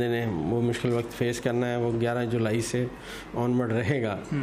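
No technical faults can be heard anywhere in this clip.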